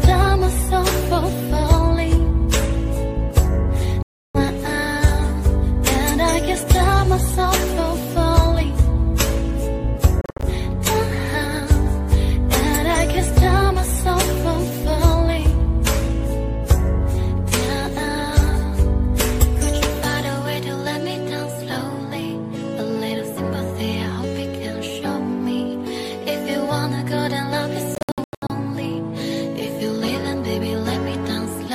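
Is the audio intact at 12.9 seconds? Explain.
Yes, the audio is intact at 12.9 seconds, with no dropout, glitch or other fault at that moment.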